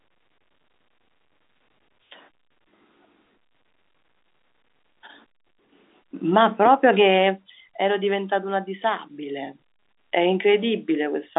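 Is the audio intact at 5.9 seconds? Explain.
Yes, at 5.9 seconds the audio is intact, with the speech carried cleanly through the G.711 telephone coding and its band limited to below about 3.8 kHz.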